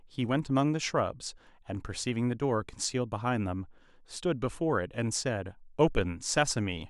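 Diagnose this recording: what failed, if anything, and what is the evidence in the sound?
At 5.21 s the speech jumps with no gap, the mark of a dropped buffer (overrun), likely at the driver or buffer stage: a few milliseconds went uncollected and were overwritten. The waveform shows a sudden step, and the spectrogram a thin broadband vertical line.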